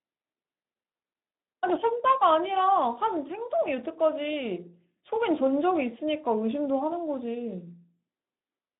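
Speex codec damage runs from start to finish. This CELP speech coder spends too few bits on the excitation signal, so the speech comes out noisy and hoarse, with plainly audible damage, which fits a bitrate around 11 kbps. The sound is also confined to a telephone-like band of roughly 200 Hz to 3.7 kHz, with nothing above 3.8 kHz, so the speech is muffled and lacks crisp sibilance.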